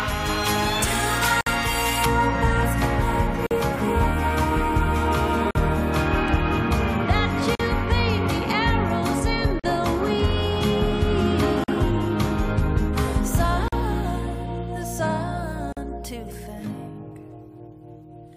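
For the first 2.06 s the top end is about 11 dB too strong at 10 kHz relative to 1 kHz, so the audio sounds thin and sibilant. This is pre-emphasis left on, matching a J.17 curve with no de-emphasis, and it shows on a spectrogram as an over-bright upper band. There is also a gap at a join of encoded pieces every 2 s. The first gap runs from 1.41 to 1.47 s (56 ms), and the rest last about 43 ms each, at 3.47, 5.51, 7.55, 9.60, 11.64, 13.68 and 15.73 s. Separately encoded segments were butted together with their start delay and end padding left in, which leaves short dropouts with smeared edges in the waveform and thin, full-height blank columns on the spectrogram.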